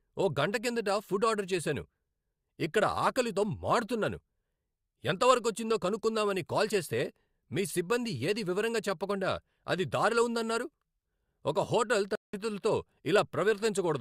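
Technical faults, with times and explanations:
12.15 to 12.35 s, stream reconnect: the speech drops to 178 ms of silence, a flat gap in the waveform and a blank vertical band on the spectrogram. The connection broke and a fresh decoder restarted mid-stream, so the speech resumes roughly 0.2 s further on, skipping that stretch.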